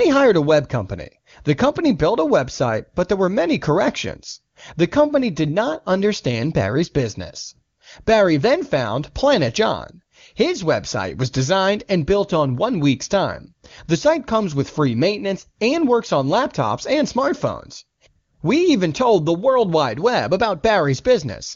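No technical faults occur in this speech, which comes through the AMR wideband (HD Voice) codec at 23.85 kbit/s.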